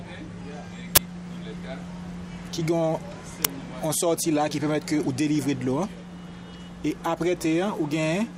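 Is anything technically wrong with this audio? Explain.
Yes. An uninitialised buffer sounds at 0.96 to 0.98 s and at 3.45 s. Blocks of 20 ms and 5 ms played before being filled, so leftover memory bursts out as loud noise, seen as tall waveform slabs and broadband spectrogram stripes.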